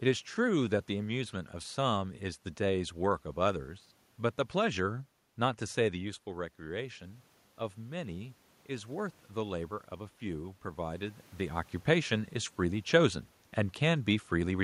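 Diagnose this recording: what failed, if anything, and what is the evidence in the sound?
Automatic gain rising, 5.98 to 11.68 s, in call processing. Near 6 s the talker moves away and the input drops about 9 dB. The gain control then climbs about 6 dB over several seconds, so voice and room noise swell together.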